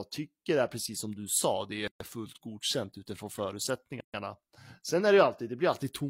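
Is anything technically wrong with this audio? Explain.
Yes. There is a gap at a join of encoded pieces, heard twice in this speech. From 1.88 to 2.00 s, between "du sa det är" and "fullt godkänt utifrån", the sound drops out for about 130 ms. It drops out again from 4.00 to 4.14 s. The joins fall every 2 seconds. Each piece was encoded on its own and joined untrimmed. The encoder's start-up silence and its padded last frame stayed in. The result is a short hole whose edges are smeared by the codec. The speech then resumes where it stopped.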